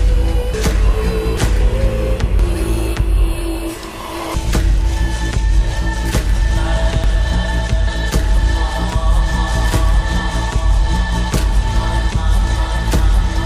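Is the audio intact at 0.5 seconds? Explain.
No. At 0.54 s the audio jumps forward, skipping roughly 0.7 s of material, which fits about ten compressed frames of 92.9 ms each. These are compressed frames skipped: whole frames were missing from the stream or rejected by the decoder as damaged, so playback resumes a multiple of the frame length later.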